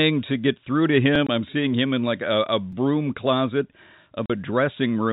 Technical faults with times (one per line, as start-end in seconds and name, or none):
1.16 repeated buffer
1.27-1.29 packet loss filled with silence
2.72 repeated buffer
4.26-4.30 packet loss filled with silence